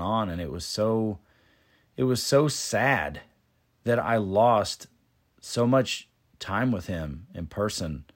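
Nothing technically wrong stands out in this bit of speech; there's no fault to point to anywhere in it.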